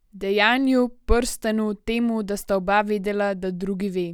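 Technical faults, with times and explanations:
No technical faults can be heard anywhere in the recording, and the signal stays continuous and steady throughout.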